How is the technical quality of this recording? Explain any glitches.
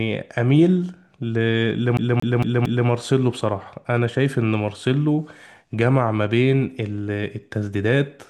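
The recording has one clear glitch, a CD stuck on one turn from 1.97 to 2.88 s: a scratch keeps kicking the laser back a track, so a 227 ms slice of speech repeats four times with brief mutes, a rapid, even stutter.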